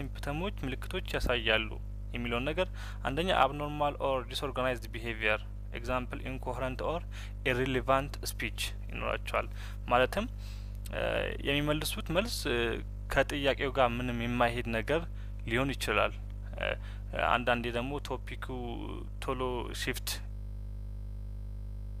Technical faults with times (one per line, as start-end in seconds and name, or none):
20.33-22.00 system hang loop